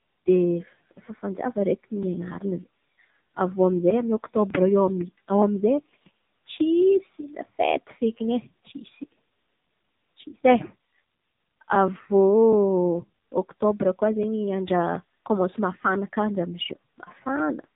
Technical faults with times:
0.00-17.75 AMR narrowband mobile codec

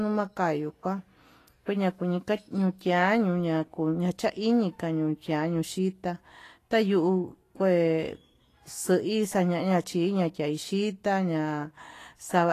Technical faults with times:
0.00-12.53 Vorbis compression

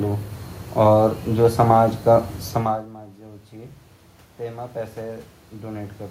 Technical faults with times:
4.43-6.11 automatic gain rising

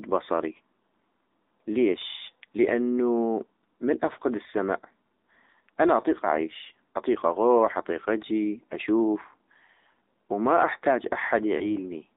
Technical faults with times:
0.00-12.17 AMR narrowband mobile codec
11.58-11.70 lost AMR speech frames

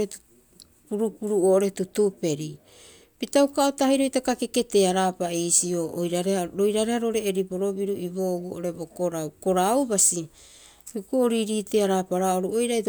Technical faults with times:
none

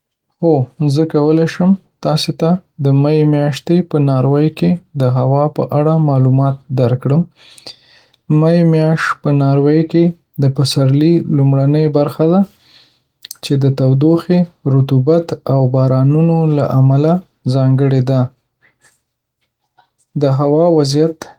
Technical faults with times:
none

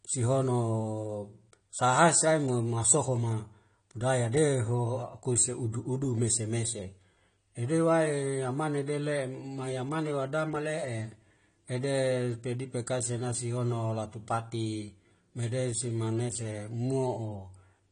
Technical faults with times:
0.00-17.91 AAC compression

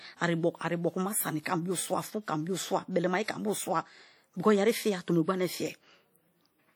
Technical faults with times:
0.00-6.76 WMA compression

